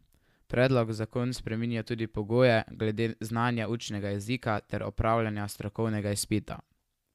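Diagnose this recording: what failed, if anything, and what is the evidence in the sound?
Nothing failed in this recording, and the sound offers no evidence of a fault at any stage.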